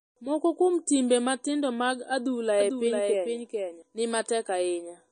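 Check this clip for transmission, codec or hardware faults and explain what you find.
Two problems stand out: the whole clip carries plainly audible codec damage, and a second copy of the audio runs under one stretch.

MP3 compression runs throughout, and the damage is plainly audible. Nothing survives above 9.4 kHz, so the top end is cut off flat. The s sounds go swirly and watery because weak frequency lines drop in and out between frames. That sound is most likely an MP3 encode starved of bits, consistent with a low bitrate of about 33 kbps, where the encoder sacrifices treble and fine detail first.

The doubled audio track runs from 2.60 s to 3.82 s, starting right after "timbe matindo mag adhula". A full-band copy of the speech trails the original by roughly 400 ms, at about 5 dB down. It has no decay or room sound, which rules out an echo. It cuts in and out abruptly at both ends. 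The likely cause is the same signal reaching the mix twice, either through a second, slower capture path or an edit that left two offset copies.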